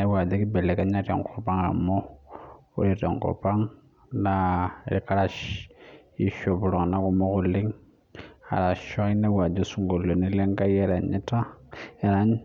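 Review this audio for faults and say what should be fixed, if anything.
Clock slip clicks from 0.21 to 12.32 s: faint ticks roughly every 0.3 s, likely single-sample slips between two unsynchronised clocks about 70 ppm apart. Fix by locking both devices to a shared word clock or adding asynchronous sample-rate conversion.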